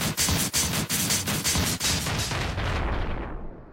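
A second, slower capture path or an out-of-step edit has likely mixed the audio in twice, producing a doubled audio track for the whole clip. A full-band copy trails the original by roughly 300 ms at about 5 dB quieter, a dry repeat with no decay or room colour.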